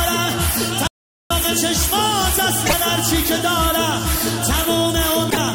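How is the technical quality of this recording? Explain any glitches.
The recording has clear technical faults: one stretch of dead silence and two short glitches from damaged data.

From 0.87 to 1.30 s the sound cuts out completely, leaving about 0.43 s of silence with no room tone. The likely cause is a lost input, such as a disconnected device, a failed link or an accidental mute, while the recorder kept writing silence. This is an audio dropout to silence, not a codec fault: there is no chirp or smearing at the edges, just an abrupt stop and restart, and whatever happened in that gap is gone.

At 2.63 to 2.74 s and again at 5.27 to 5.37 s, each lasting about 0.11 s, brief glitches interrupt the sound. This is damaged data in a compressed stream. Corrupted bytes made the decoder misread frames, lose sync and hunt for the next valid header. Unlike the dropout, these events are far shorter.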